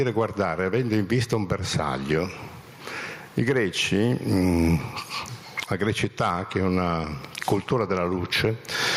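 Gain pumping runs through the whole clip. The gain swings by around 20 dB, so loud and soft parts sound squashed together. The likely cause is gain set far too high, with a fast limiter clamping each peak.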